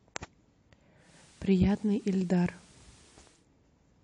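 At 0.97 s a soft hiss fades in under the speech over about 0.22 s, sitting roughly 30 dB below it, and the level shifts by about 1 dB. At 3.46 s the hiss fades back out. This is digital radio blending to analogue: the receiver lost its digital signal and cross-faded to the station's FM broadcast, whose noise floor carries that hiss, then returned to digital once reception recovered.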